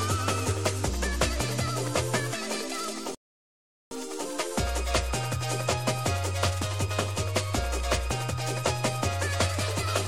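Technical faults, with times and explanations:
3.15 to 3.91 s, rebuffering stall. The sound stops dead and the line goes silent for about 0.76 s. Then it picks up again at exactly the point where it broke off. The player had used up all the audio it had downloaded. It had to wait for more data before it could continue. Nothing is skipped or repeated. The gap simply adds 764 ms to the running time.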